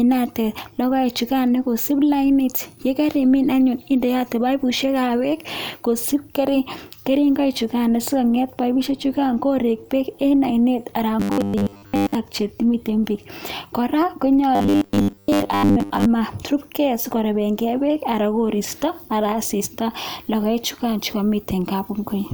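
Robotic sound from repeated short buffers appears from 11.2 to 12.15 s and again from 14.55 to 16.05 s. In both stretches the speech collapses into a rigid, metallic buzz near 100 Hz that only loosely tracks the words. The likely cause is audio arriving too slowly, so playback keeps looping a 10 ms slice, which sets the 100 Hz pitch. Roughly 70% of each stretch is repeated material, not real speech.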